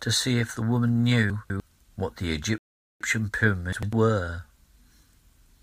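From 1.3 to 1.6 s, chunks out of order: a 100 ms chunk plays two chunks late, so the speech jumbles briefly, leaving three hard joins. From 2.58 to 3.01 s, a rebuffering stall drops the speech into 426 ms of silence, a flat waveform and a blank spectrogram band, before it resumes exactly where it stopped. From 3.73 to 3.93 s, a 100 ms chunk plays one chunk late, with the same garble.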